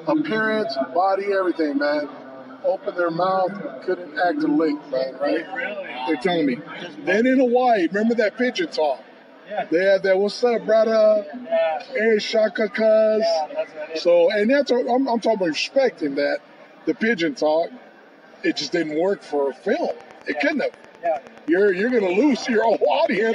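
From 19.9 s to 23.28 s, a train of clicks runs over the sound. The clicks are evenly spaced, at about 9.5 per second, and there are around thirty of them. Each one has much the same sharp shape. They peak at roughly the level of the sound itself, and are heard as steady ticking. The likely cause is a repeating pulse leaking in, such as interference from nearby equipment or a faulty connection or power supply.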